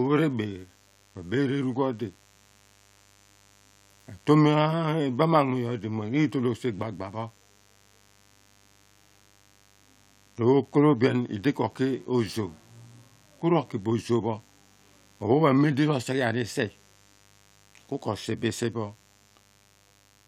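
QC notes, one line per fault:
Throughout: mains buzz. A steady, raspy buzz sits under the speech for the whole clip, about 35 dB below the signal. It is built on 50 Hz mains, but sharp switching spikes arrive twice per cycle, so the interference carries a dense stack of harmonics climbing into the kilohertz range. That upper energy is what makes it rasp rather than hum, and it points to a dimmer, a rectifier or a missing shield letting the spikes into the audio path.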